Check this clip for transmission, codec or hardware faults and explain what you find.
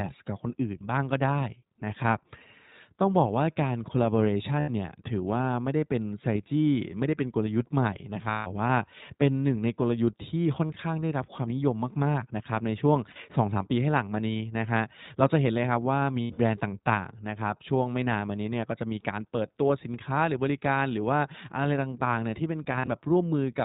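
The speech runs through a low-bitrate narrowband codec throughout and has six short dropouts where lost packets were concealed.

iLBC codec, throughout the clip: each 20 ms frame is coded independently and nothing above 4 kHz survives. The damage is plainly audible: a dull, band-limited tone with a rough, slightly synthetic edge, consistent with a rate around 15 kbps.

Lost iLBC frames, at 4.60 to 4.70 s, 8.30 to 8.48 s, 10.66 to 10.71 s, 13.12 to 13.17 s, 16.22 to 16.40 s and 22.72 to 22.88 s: the decoder filled missing frames by repeating the last pitch cycle with added noise. Each gap sounds like a held, faintly buzzy vowel. The audio recovers almost immediately because frames stand alone. The 8.30 s gap is the longest, about 160 ms. The last two are broken into short scattered runs.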